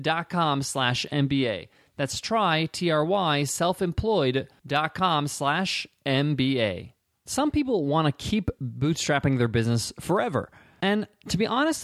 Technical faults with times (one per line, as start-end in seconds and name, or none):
none